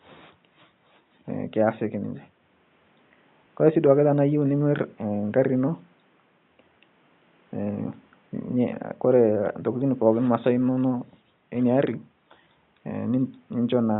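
A speech recording with no technical fault to report. Faint background noise from the room sits about 40 dB below the speech, part of the original recording rather than anything added by the system.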